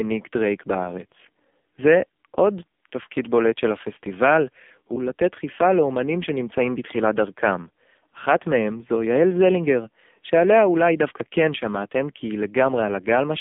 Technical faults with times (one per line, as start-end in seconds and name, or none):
0.00-13.40 AMR narrowband mobile codec